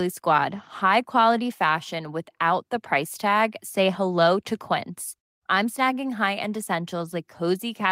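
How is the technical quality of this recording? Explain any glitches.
No glitches here, just speech with nothing going wrong anywhere along the way.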